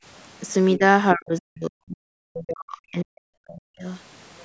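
At 0.76 to 0.82 s the speech dips briefly by about 10 dB, then from 1.14 to 3.87 s it is pushed down far harder, by up to about 40 dB, over nearly three seconds. This is likely speech suppressed in double talk: the echo canceller mistook the talker for loudspeaker echo while the far side spoke. Unlike a dropout or gating, the level sinks as the canceller turns the voice down along with the echo.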